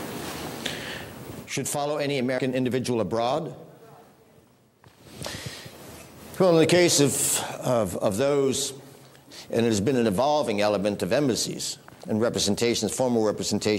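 At 2.37 s the audio skips forward by roughly 150 ms. That's compressed frames being skipped: a chunk of the encoded stream was either missing or rejected by the decoder as damaged, so it never got played. The size of the jump fits about seven frames of roughly 23.2 ms each.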